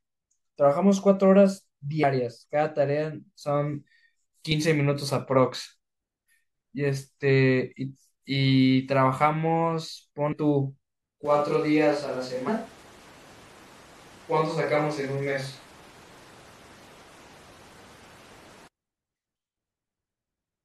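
A speech recording with two distinct faults. Damaged data in a compressed stream produces short glitches at 2.02 s, from 10.31 to 10.33 s, and at 12.47 s. At each point the decoder hits corrupted frames, misreads or discards them, and loses sync until it locks onto the next valid frame header. The result is a brief disruption in the sound. From 11.25 to 18.68 s the sound turns roomy and hollow, with thinner bass and a background noise floor roughly 25 dB below the speech. The overall level stays about the same. Both the onset and the return are abrupt, which points to a likely switch to a distant microphone, for example a camera's built-in one, in place of a failed or missing close microphone.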